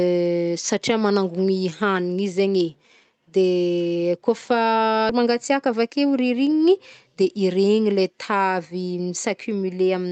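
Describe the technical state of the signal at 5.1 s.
At 5.09 to 5.11 s there is a skip ahead. About a second of the speech is simply gone. Later audio was already queued, so playback jumped forward. Nothing fills the cut. The two sides meet almost directly, and the speech lurches abruptly mid-flow. The total delay drops by roughly the same second.

Right after, from 5.19 to 6.14 s, comes a jitter buffer speed-up. The buffer was still fuller than its target, so it trimmed short pitch-period pieces again and again, removing about a tenth of a second in total. Playback runs at 108% speed with the pitch unchanged. The speech sounds rushed up to "rirignigny de". The Opus call path adds its coding noise and cuts off everything above 8 kHz.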